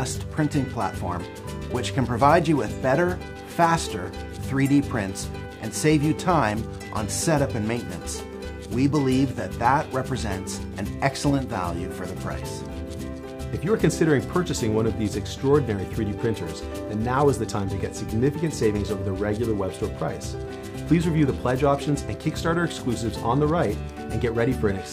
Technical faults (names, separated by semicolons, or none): none